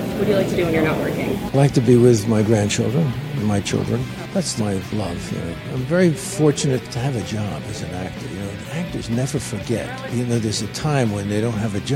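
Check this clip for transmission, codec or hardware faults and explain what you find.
One fault: compressed frames skipped at 1.54 s. A few 21.3 ms frames never decode, so the audio jumps about a tenth of a second ahead.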